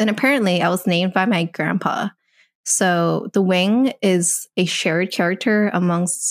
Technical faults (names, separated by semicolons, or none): none